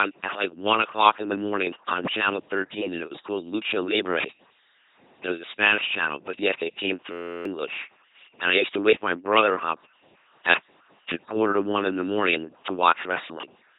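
From start to finish the speech has the LPC-10 vocoder on it, and the damage is heavy: a buzzy, mechanical robot voice, with nothing above 3.8 kHz. Every instant gets forced into fully voiced or fully noisy, so there's buzz or hiss wherever that call goes wrong. The coarseness fits a 2.4 kbit/s encode.

Also present throughout is channel delay comb filtering. One channel runs late by about 0.7 ms, and folding the two to mono cancels a series of evenly spaced frequencies, with the first notch somewhere around 700 Hz. It gives that hollow, phasey colour.

Right after "but yet it came", from 7.12 to 7.45 s, there's a system hang loop. The system froze while the hardware kept replaying one 11.61 ms chunk, which fits a 512-sample buffer. It plays 29 times and comes out as a steady 86.1 Hz buzz, and about a third of a second of audio is lost.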